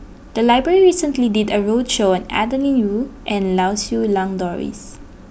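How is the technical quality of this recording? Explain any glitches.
There are no glitches to explain here. The speech carries on without any technical fault at any point.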